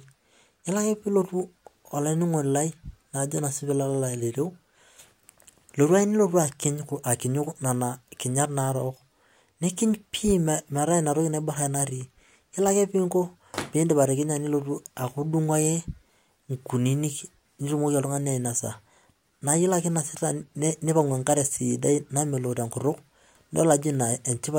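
No technical faults are audible.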